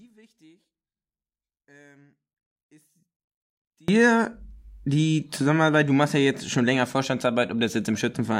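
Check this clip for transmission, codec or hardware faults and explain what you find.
There's one fault. From 0.0 to 3.88 s the speech nearly vanishes in mono, about 34 dB down, likely from one channel inverted, so the centred voice cancels when both sides are summed.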